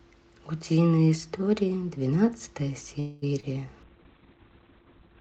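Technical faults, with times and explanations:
2.99–3.24 s, call audio freeze: The speech stops moving forward for about 0.23 s. In its place the last sound is drawn out as a hum or hiss that fades. The delivery stalled, most likely because packets were held up and the jitter buffer ran empty, so the receiver had nothing new to play. When the stream resumes, the speech carries on from exactly where it stopped. Nothing is lost, only delayed, and that sets it apart from a dropout, where a piece of speech would vanish.
3.40 s, short concealed packet loss: A brief smear lasting roughly 0.03 s replaces a 20 ms piece of speech that never arrived. The receiver patched the hole by extending the preceding sound, following its pitch if voiced or using shaped noise if not, then blended back into the real signal. Unlike the freeze just before it, the timing stretches only slightly. The missing fragment is gone, and a tiny wobble sits where it was.
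3.83 s to the end, call bitrate drop: From here the speech turns coarse and muffled. The encoder's rate fell from 32 to 6 kbps and stayed at that low point for about 1.3 s. With so few bits, Opus codes each frame roughly, giving a watery, grainy texture, and it narrows the audio band from 8 kHz to 4 kHz, removing the crisp upper detail. This is a lasting change in tone and clarity, not a momentary glitch.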